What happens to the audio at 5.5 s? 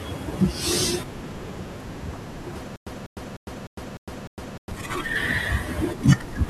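Nothing goes wrong at 5.5 s; the speech carries on intact through that moment, with no dropout, glitch or distortion.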